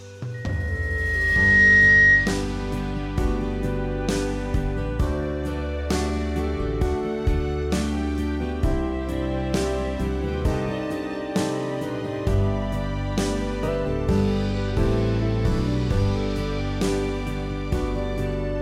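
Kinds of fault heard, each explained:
Loudspeaker feedback squeal: the microphone re-amplifies its own loudspeaker, so a 1.9 kHz tone swells over roughly a second and a half, about 10 dB above the audio, from 0.34 to 2.45 s.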